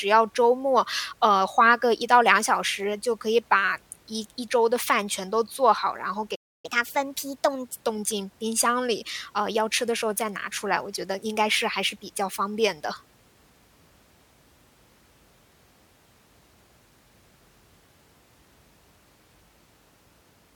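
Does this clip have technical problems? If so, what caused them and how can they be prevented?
Yes. A playback stall silences the speech from 6.35 to 6.66 s, a gap of about 0.29 s. The player likely ran dry of buffered data or had its thread blocked. A waveform shows a flat line and a spectrogram a blank vertical band. A deeper jitter buffer and a high-priority audio thread prevent it.

Catch-up at higher speed follows from 6.66 to 7.81 s. The player resamples its backlog at 1.25× speed, raising pitch by about four semitones. On a spectrogram the harmonics sit visibly higher and syllables look compressed in time. Time-stretching without a pitch change, or simply dropping silence, avoids it.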